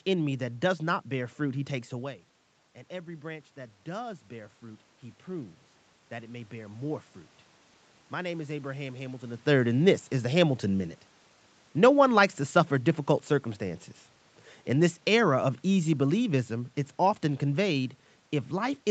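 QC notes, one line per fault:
1.96–7.03 s, automatic gain rising: after "bear fruit he takes" the talker drops about 13 dB, and gain climbs about 6 dB, lifting voice and room noise together.
14.68–18.9 s, automatic gain falling: after "to suffer difficult circumstances" the gain sinks gradually to the end, voice and background fading together, unlike a talker leaning back.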